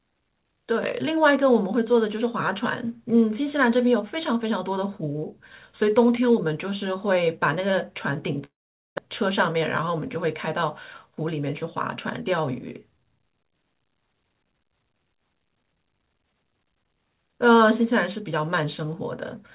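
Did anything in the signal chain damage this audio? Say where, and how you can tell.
Yes. At the network stage, from 8.44 to 9.00 s the sound gives way to a fading buzz and then near-silence, which looks like a decaying smear and then a flat gap. The likely cause is a long network dropout that lost about 400 ms.

At the jitter buffer, a speed-up runs from 9.07 to 10.34 s at 104% and from 11.06 to 11.62 s at 108%. Each trims roughly 50 ms of pitch periods, so the 108% stretch sounds hurried at unchanged pitch.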